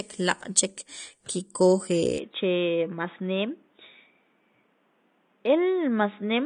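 From the start, the speech sounds dull and smeary, with nothing above 9.7 kHz. This is likely AAC compression at a low bitrate, near 32 kbps.

At 2.18 s the input switched to a poorer device, likely. With no gap, the band narrows to 3.8 kHz, the level drops about 5 dB, and faint new noise appears.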